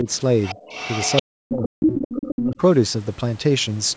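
Speech in which the talker's level repeatedly sags or vanishes: a brief dip at 0.03–0.07 s, a deeper drop of about 25 dB at 0.54–0.69 s, a near-dropout of about 40 dB from 1.22 to 2.01 s, and a milder dip at 2.36–2.6 s. This is likely speech suppressed in double talk, with the echo canceller turning everything down when it couldn't separate the talker from the loudspeaker echo. Underneath, a second voice intrudes from 0.43 to 1.23 s, roughly 10 dB below the talker, and again from 1.66 to 2.56 s at about equal loudness. That points to the other side's voice leaking through, likely because the canceller left loudspeaker playback in the microphone signal.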